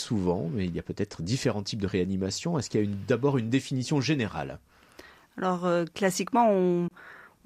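It's a speech clip with a short hole near the end: from 6.88 to 6.91 s the sound cuts out for about 27 ms and picks up further along, as if it kept playing. That's likely a Bluetooth dropout, with a couple of packets arriving too late and getting discarded.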